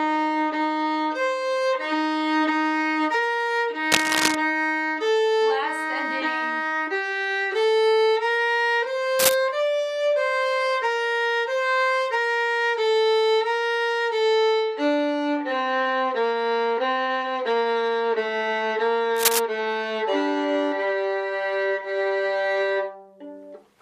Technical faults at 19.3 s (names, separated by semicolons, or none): cable scratch noise